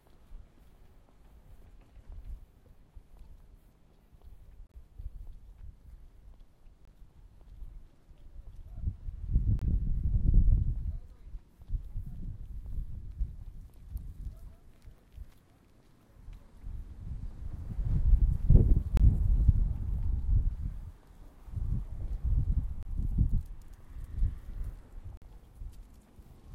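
There are six short dropouts from corrupt frame muting: 4.67 to 4.76 s, 6.85 to 6.89 s, 9.59 to 9.63 s, 18.97 to 18.99 s, 22.83 to 22.85 s and 25.17 to 25.23 s. Each time, damaged compressed frames got rejected by the decoder and the player filled the gap with silence. The sound cuts out abruptly for anything from about 20 to 90 ms, then carries on in time. The longest hole, at 4.67 s, points to several frames lost together.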